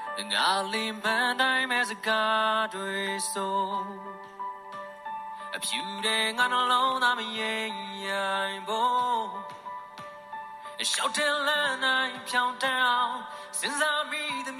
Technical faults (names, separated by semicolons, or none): train of clicks